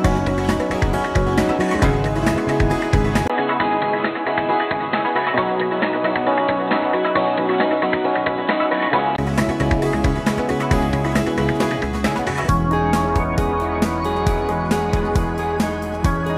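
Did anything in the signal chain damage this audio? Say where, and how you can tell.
Yes. At the capture stage, the input was likely switched to a poorer device from 3.28 s to 9.18 s. A brief gap of about 20 ms at 3.28 s marks the handover. Through that stretch nothing above 4.2 kHz survives, so the audio turns dull and boxy, and a fresh background noise sits around 35 dB under the signal. The level barely moves, so the change is heard as tone and band narrowing rather than loudness.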